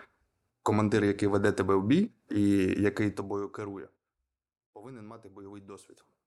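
No technical faults can be heard anywhere in the speech. The level rises and falls smoothly where it changes, with each change gliding into place as a fader would.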